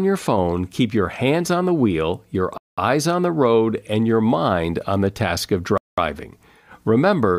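The speech was delivered in 3-second chunks with 200 ms of silence inserted at each join, a gap between chunks. Nothing is dropped, but the flow stops dead twice. At 2.58 to 2.78 s a hole falls after "on the wheel your" before "eyes on the road", and at 5.78 to 5.98 s another follows "on the task of". The two gaps are 3.2 s apart, which matches one chunk plus its gap.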